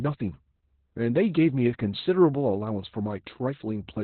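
Opus voice compression runs throughout the speech. The sound points to the SILK linear-prediction coder at a very low rate, around 8 kbps. It cuts the band to narrowband, leaving nothing above 4.2 kHz, and codes the excitation coarsely, so the speech sounds muffled, hoarse and slightly robotic.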